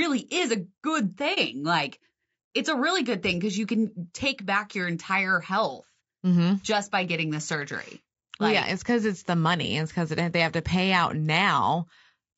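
From the first second to the end, the speech carries plainly audible low-delay AAC compression damage, likely from AAC-ELD, the codec used for video calls. Its short frames split the spectrum too coarsely to hold the pitch harmonics cleanly, and at a bitrate that sounds near 32 kbps there are too few bits to fill the gaps. The result is a rough, grainy voice with noise smeared between harmonics and a dull, somewhat synthetic top band.

At 1.34 s, just after "is a good", an AAC frame loss with muting opens a brief hole lasting to 1.38 s. The missing frame was replaced with silence, and the overlapping transform windows on either side fade the sound down and back up rather than cutting it sharply. It is a soft-edged dropout of about 30 to 40 ms, which fits a single lost frame.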